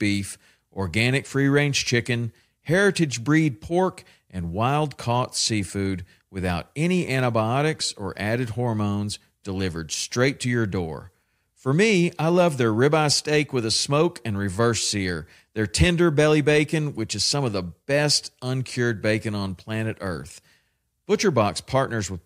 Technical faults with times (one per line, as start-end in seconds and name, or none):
none